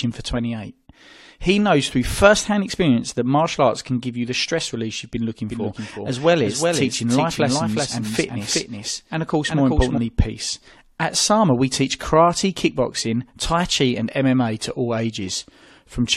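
Right after "release you've been looking", from 5.5 to 10.0 s, the speech has a doubled audio track: a dry copy about 5 dB quieter trails roughly 0.4 s behind, likely from a second, slower capture path.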